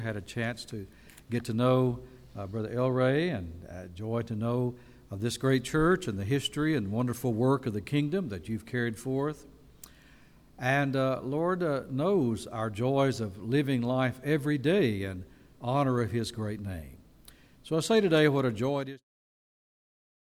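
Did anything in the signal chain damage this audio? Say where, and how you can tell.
No, nothing in the signal chain damaged this audio. The level eases down in a smooth fade-out starting around 18.5 s and reaching silence at 19.05 s, with no click or hard edge, just as an editor would shape an ending.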